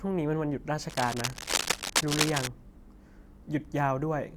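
A speech clip with a burst of scratching, crackling noise laid over the speech from 0.90 s to 2.47 s, dense and uneven, reaching about the same loudness as the speech so that it competes with it for that stretch. This is cable scratch noise, likely from a worn cable, connector or control being moved, its contact resistance fluctuating rapidly and injecting those irregular bursts into the signal.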